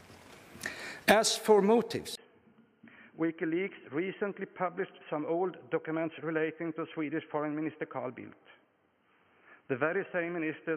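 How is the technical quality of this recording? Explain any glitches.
The recording has one fault. At 2.15 s the input likely switched to a poorer device, so everything after passes nothing above 3.2 kHz. After a 20 ms silence, the sound turns dull and boxy, drops slightly in level, and carries a faint new background noise through to the end.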